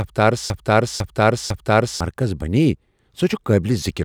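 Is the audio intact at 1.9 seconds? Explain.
No, a broken-record loop runs from the start to 2.01 s: the same 0.50 s of speech repeats exactly, likely from a stalled stream, before "مرکزی بنییہ". Unlike echo, the repeats don't fade.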